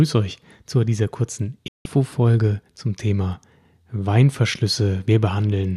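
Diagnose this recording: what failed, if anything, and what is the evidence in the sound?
The speech drops abruptly to silence at 1.68 s and returns at 1.86 s. The cut is nearly instant, with a fade of only about 3 ms, and what was said during the gap is simply missing rather than smeared or repeated. This is a digital broadcast dropout at the transmission and reception stage. The receiver lost the signal or rejected corrupted frames and muted its output until valid frames arrived again. About 168 ms of programme is gone, which fits several consecutive frames failing together.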